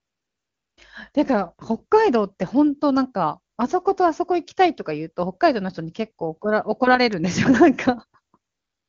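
A smooth, steady hiss replaces the real background from 0 to 0.77 s, again from 3.55 to 3.57 s, and from 8.51 s to the end. This is AMR comfort noise: the phone judged those stretches silent, stopped sending speech frames, and the receiver synthesised filler noise from a rough level and spectrum description. A single sharp, broadband tick at 7.13 s is a bit error spike, where a flipped bit briefly pushed two samples far off their true values before they snapped back. The speech is clear, with little audible coding damage, which points to a high AMR-WB rate.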